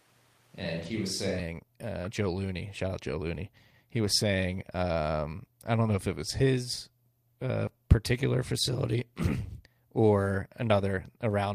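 Right from the start, and already going when the clip begins, the speech sounds roomy and hollow with thinner bass. That's the sound of a switch to a distant microphone, likely because the close mic dropped out and a farther one took over. The level stays about the same, but room noise comes up to roughly 30 dB below the speech. At 1.39 s it snaps back to the close, fuller sound.

Inside that stretch, from 0.81 to 0.91 s, there's a short patch that goes rough and grainy without any gap. That's a lost packet rebuilt from error correction: the decoder filled 60 ms from the low-bitrate backup copies carried in later packets, which fits three lost packets. The same thing happens at 3.07 to 3.13 s (40 ms, consistent with two packets) and at 8.13 to 8.15 s (20 ms, a single packet).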